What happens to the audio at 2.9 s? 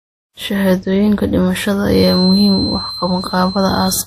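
A loudspeaker-to-microphone loop is likely sitting just at the edge of feedback from 1.87 s to the end at 4.06 s, so at 2.9 s a feedback whistle at 4.1 kHz keeps ringing without building up. It is a thin, steady tone behind the speech, swelling and fading slowly in level and sitting well below it.

Throughout the speech, the audio has likely been transcoded between lossy codecs, with each encoder spending bits on the previous one's artefacts and adding its own. The blended artefacts point to a low-rate MP3 stage followed by WMA, and nothing remains above 15.1 kHz.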